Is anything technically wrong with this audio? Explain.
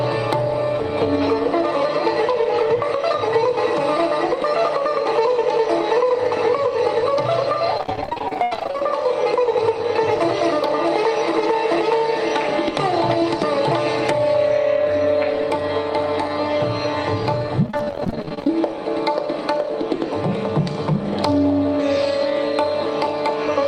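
Yes. Repeated packet loss (robotic sound) appears twice, from 7.77 to 8.82 s and from 17.66 to 18.61 s. In both stretches packets kept going missing, and each hole was filled by stretching the last sound. That concealment covers about 44% of each span. The gaps run up to 80 ms in the first stretch and 33 ms in the second. The sound comes out choppy, with pieces missing. On a spectrogram the harmonics smear into flat, repeated bands. In the waveform you can see short copied segments and small breaks.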